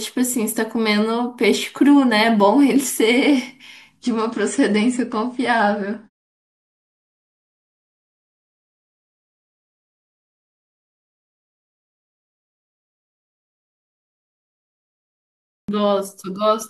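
A speech recording carries two faults. From 4.03 to 8.03 s the connection feeding an adaptive stream slowed, so the player switched to a lower-bitrate version of the audio for those four seconds, consistent with a step down from a 96 kbit/s to a 32 kbit/s AAC encoding. The drop in quality is abrupt and leaves no gap. Nothing is left above 9.7 kHz, so the treble goes dull, and coding artefacts thicken until the higher-quality stream resumes at 8.03 s. Near the end, the output device went to sleep during a long silence of about 9.6 s. The result is a clipped start after a pause at 15.62 s. Roughly 64 ms of the returning speech is swallowed, so it bursts out of silence with its opening sounds missing.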